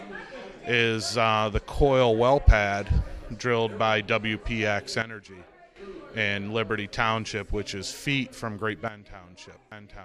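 At 5.02 s the whole signal, background noise included, abruptly falls about 12 dB, snapping back at 5.76 s, then drops the same way again from 8.88 s to the end. It's a sudden gain jump, likely a gain change applied instantly with no ramp.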